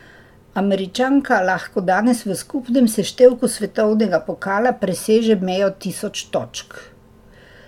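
Nothing stood out as a technical problem on listening to this recording of speech.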